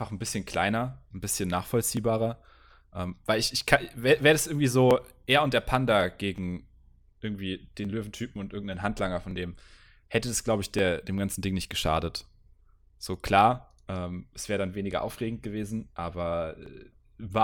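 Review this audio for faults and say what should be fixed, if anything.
A regular click runs through the speech from 0.50 s to 16.66 s, recurring every 1.47 s, about ten in all. These are clock drift buffer slips: the likely cause is two devices on independent clocks differing by roughly 0.1 percent, so a block of around 70 samples is dropped or repeated each time. The strict spacing separates them from random dropouts or packet loss. To prevent it, lock both devices to one clock or add adaptive resampling.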